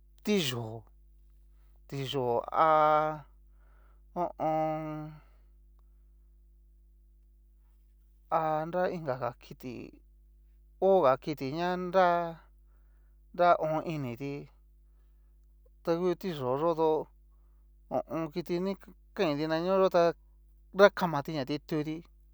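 A steady mains hum runs under the speech from start to finish. It sits at 50 Hz, with a few harmonics stacked above it. The tone never changes in pitch or level. It stays roughly 30 dB below the speech, so it fills every pause. Power-line current has leaked into the signal path. A ground loop or a transformer near the recording chain is the usual route. The result is a constant low drone beneath everything.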